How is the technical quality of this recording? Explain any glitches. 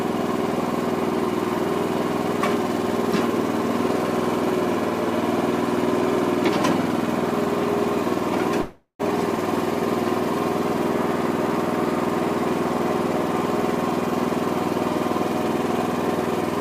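One glitch stands out. A call audio freeze at 8.61 to 9.01 s is likely caused by delayed packets draining the jitter buffer: the last sound stretches into a fading buzz, ending in about 70 ms of silence. The audio then resumes where it stopped, about 380 ms late, with nothing lost.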